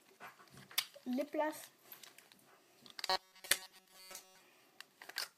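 From 3.06 to 4.40 s the sound turns to a rigid metallic buzz at 188 Hz: robotic sound, likely from repeating short buffers of about 5.3 ms.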